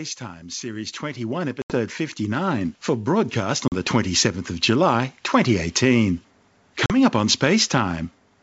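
From 0.44 s to 4.25 s the speech and the background noise swell together, climbing by about 13 dB over nearly four seconds. This is automatic gain rising: the gain control judged the input too quiet and raised its gain step by step, lifting everything it hears rather than just the talker.

During that rise, at 1.62 to 1.79 s, the sound drops into a hard-edged hole, and two shorter holes follow at 3.68 to 3.73 s and 6.86 to 6.95 s. After each gap the speech comes back slightly distorted, then settles within a few tens of milliseconds. This is packet loss on an ADPCM call. About 80 ms was lost in the first gap and about 40 ms in each of the others, a few packets at a time. The decoder filled each gap with silence, and its adaptive predictor and step size lost step with the sender's, which is why the speech is wrong at first and then recovers.

The underlying G.722 wideband telephone coding carries speech clearly up to about 7 kHz, with a light hiss in the upper band and only faint coding damage, which points to the full 64 kbit/s mode.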